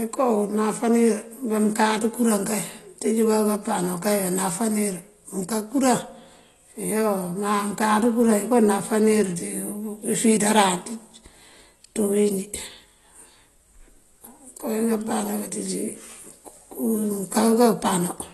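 From start to finish the speech sounds dull and smeared, with nothing above 12 kHz and a warbling, fizzy texture clinging to sustained vowels and sibilants. The likely cause is AAC compression (AAC-LC) at a low bitrate, which fits roughly 32 kbps: with so few bits the encoder drops the top band entirely and quantises the remaining spectrum coarsely, leaving gaps or noise-filled bands that shimmer and swirl rather than holding steady.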